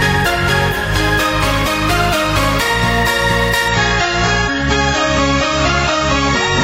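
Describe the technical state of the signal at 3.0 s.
The signal is intact at 3.0 s, with no dropout, distortion, glitch or other technical fault audible at that moment.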